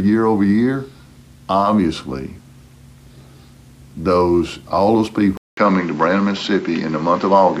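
At 5.37 s the sound drops out for about 200 ms, then returns duller and narrower, with nothing above 7.6 kHz, and stays that way to the end. A faint new background noise sits roughly 30 dB under the signal, while the loudness stays about the same. This is likely an input switched to a poorer device partway through the recording, a change that brings a narrower band and its own noise floor.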